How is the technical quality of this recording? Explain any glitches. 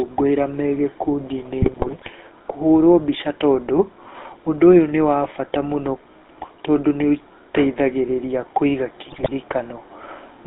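The recording is poor: the whole clip has passed through an old mobile phone codec, and it breaks up in two places.

GSM full-rate codec, throughout: the sound is confined to roughly 250 Hz to 3.7 kHz and has a buzzy, gravelly grain. The codec models the vocal tract and excites it with a coarse, regularly spaced pulse train, consistent with the 13 kbps full-rate coder, so fine detail is replaced by that rasp. Plain band-limiting, as on an ordinary landline, would sound muffled but smooth, without this roughness.

GSM bit errors, 1.62 to 2.11 s (just before "kũhũrwo mbica tondũ") and 9.06 to 9.29 s (just after "tondũ nĩũteithagĩrĩria kũiga"): the sound turns into squawks, pops and gargling. Corrupted bits, at a rate of a few percent, reached the decoder, so the filter, pitch and gain values it rebuilt were wrong, warping the spectrum and throwing the level off frame by frame. Lost packets would leave gaps or smoothed-over repeats, but here the sound stays present and becomes garbled instead.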